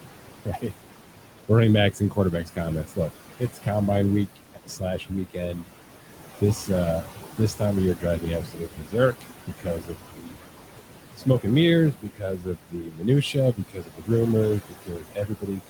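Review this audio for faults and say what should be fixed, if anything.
Noise suppressor artifacts run through the whole clip. The suppressor pulls each band it judges to be steady noise down by about 17 dB, frame by frame. The room noise, which sits about 10 dB under the speech, sinks in the gaps and swells back under each phrase. Constant hiss or hum would stay level. This noise instead pumps in step with the talking, which marks a gating process rather than the room itself.

Speech cut by the noise suppressor occurs from 0.0 to 3.68 s, from 4.36 to 5.72 s, and from 6.4 s to the end. The suppressor mistakes quiet parts of the speech for background and turns them down with it, by up to about 19 dB. About one and a half seconds of the first stretch and roughly 0.7 s of the second sound swallowed or faint. A level drop or dropout would dim the noise floor along with the speech. Here the quiet parts of the speech are turned down along with the background, which points to the suppressor's misclassification.

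Lowering the suppression depth and giving the noise estimate a slower, speech-aware update would prevent both problems.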